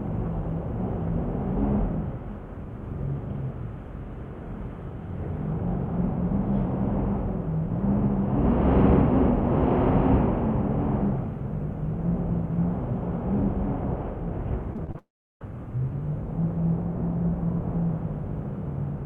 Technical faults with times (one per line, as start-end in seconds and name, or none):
14.73-14.97 repeated packet loss (robotic sound)
14.98-15.41 long network dropout